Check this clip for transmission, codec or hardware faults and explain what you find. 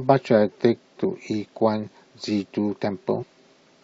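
Two faults of one kind are audible in this speech, both compressed frames skipped. At 1.03 s, and again from 3.22 to 3.24 s, the audio jumps forward, losing roughly 100 ms and then roughly 150 ms. That fits about five and then seven whole 23.2 ms frames going unplayed, missing or rejected by the decoder. There is also no silent gap, which separates this from a dropout.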